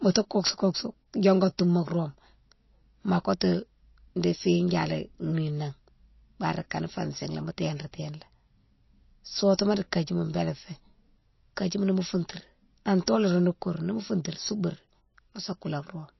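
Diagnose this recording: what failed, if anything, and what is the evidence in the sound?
Codec stage: throughout, a hard spectrogram ceiling at 5.8 kHz with flickering holes below and a plainly watery sound point to likely MP3 compression near 27 kbps.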